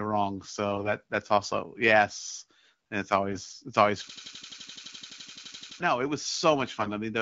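Speech clip with AMR bit errors at 0.72–0.89 s, 3.32–3.52 s and 6.80–6.90 s: corrupted, weakly protected frame bits mistime excitation pulses and skew gain and spectrum values, so the sound turns gargly and scratchy, with smeared, noisy harmonics on a spectrogram. From 4.10 to 5.80 s a system hang loop replays one 85 ms chunk at 11.7 Hz, which fits a 4096-sample buffer, producing a machine-gun stutter that shows as identical repeating waveform blocks and drops about a second and a half of audio.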